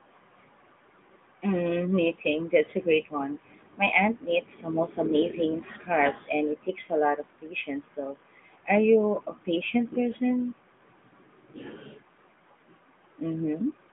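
Throughout, the speech carries AMR narrowband mobile codec damage: nothing passes above 3.8 kHz, and the vocal-tract model adds a buzzy, synthetic edge that fits roughly 10.2 kbps. That edge, not the 150 Hz to 3.6 kHz band limit alone, separates it from a simple telephone filter.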